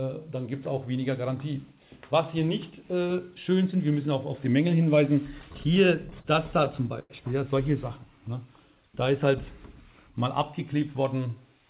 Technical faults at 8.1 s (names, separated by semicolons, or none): jitter buffer slow-down